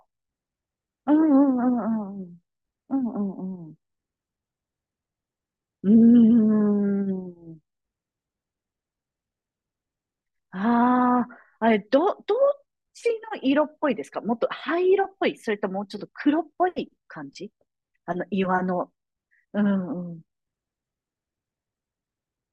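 No technical faults can be heard anywhere in this speech recording. There is nothing to mark at any point in the timeline.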